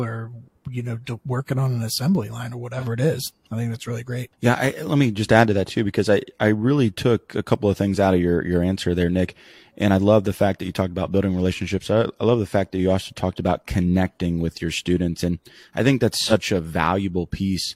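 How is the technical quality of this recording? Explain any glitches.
The speech has two brief glitches, both AAC frame loss with concealment. The first falls at 2.78 to 2.85 s, after "an assembly line or" and before "it is I think"; the second at 16.21 to 16.33 s, after "I think". Each fits a single lost frame of about 43 ms that the decoder patched by re-using the last good spectrum. Instead of a hard silent gap or click, as a plain dropout would leave, you hear a short smeared, phasey blur.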